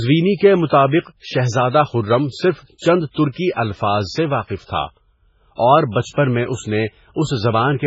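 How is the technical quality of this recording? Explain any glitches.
Quality is poor, with heavy codec damage throughout the speech. Likely MP3 compression at a very low bitrate, around 16 kbps: nothing above 7.7 kHz, and weak frequency lines dropping in and out give a watery, swirly texture.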